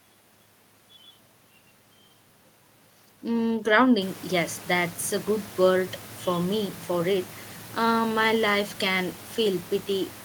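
There are no technical faults in this speech clip; the room noise that rises around four seconds belongs to the recording itself and stays well below the speech.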